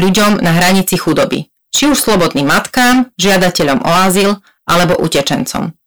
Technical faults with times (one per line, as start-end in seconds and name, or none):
0.00-5.86 hard clipping